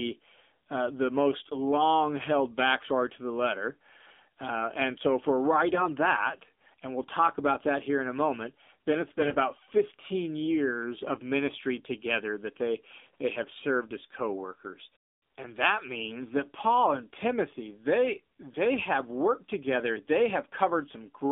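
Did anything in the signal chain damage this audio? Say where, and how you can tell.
Yes. The damage is in the codec stage, across all 21 seconds. The speech passes through the AMR narrowband mobile codec. The sound is confined to roughly 200 Hz to 3.7 kHz, with nothing above the narrowband ceiling. The speech sounds buzzy and synthetic, which fits a low AMR-NB mode around 7.4 kbps. The codec rebuilds speech from a vocal-tract model fed by sparse pulses, so fine detail is lost at this rate.

The network stage adds AMR bit errors twice, from 5.74 to 5.88 s and from 9.18 to 9.36 s. In both spots the pitch and level hold roughly steady, but the speech turns hoarse, scratchy and gargly. Each burst spans several 20 ms frames. A weak radio link flipped a few percent of the less protected bits. The checksum still passed, so the decoder used misplaced pulses and slightly wrong gain and spectrum values.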